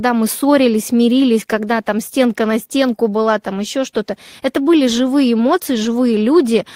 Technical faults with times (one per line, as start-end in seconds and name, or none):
none